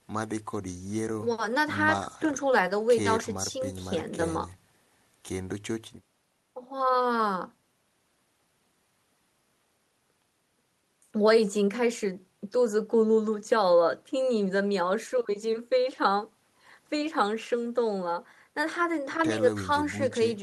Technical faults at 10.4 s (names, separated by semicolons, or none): none